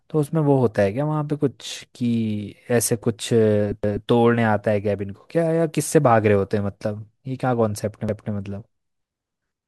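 The audio was handled in 4-second chunks that each began 250 ms before the previous one finished, so the joins overlap. At 3.84–4.09 s and again at 8.09–8.34 s, a quarter-second of speech plays twice, heard as a stutter at each seam.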